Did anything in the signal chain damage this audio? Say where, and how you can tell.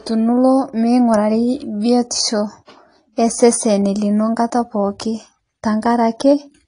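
Yes, at the codec stage, throughout the speech. It sounds dull and smeared, with a warbling, fizzy texture on sibilants and sustained sounds. That points to likely AAC compression at a low bitrate, around 32 kbps. Unlike a plain low-pass filter, the damage shifts frame by frame.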